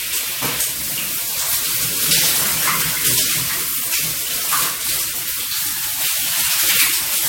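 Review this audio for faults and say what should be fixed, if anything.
Throughout, swirly, hollow smearing with blurred attacks and nothing above 16.6 kHz, likely generation loss from about four lossy re-encodes. It is worse than one low-bitrate pass would sound. Prevent it by keeping a lossless master and encoding once.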